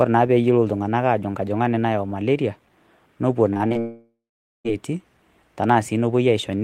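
Speech, with two network faults close together. From 3.53 to 3.77 s there is repeated packet loss, giving a robotic sound. The audio turns choppy. What sounds like four short holes appear, the longest about 33 ms. Each is patched by stretching the sound just before it. About 41% of this stretch is patched rather than real. From 3.79 to 4.67 s the sound smears into a fading buzz. It then drops to silence for roughly half a second. The audio resumes at 4.67 s, with nearly 0.86 s of the original missing. This is likely a long network dropout. No audio reached the receiver for that stretch. The receiver padded the hole by extending the last sound until it faded out.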